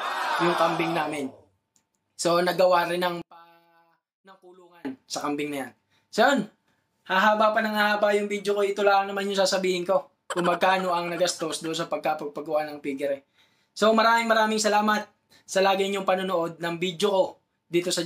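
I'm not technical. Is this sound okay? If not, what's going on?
No. Dropped samples at 2.83, 5.11, 11.66 and 13.94 seconds: each is a single sharp click, likely where a tiny sliver of audio went missing and the sound jumped.

One channel inverted from 3.22 to 4.85 seconds: the sound almost disappears, most likely because one side's signal flipped upside down and cancelled the other when combined.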